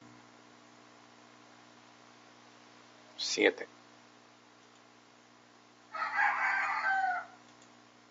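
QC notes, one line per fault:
No faults are present; the only thing underneath the speech is the room's own background noise, sitting about 34 dB below it.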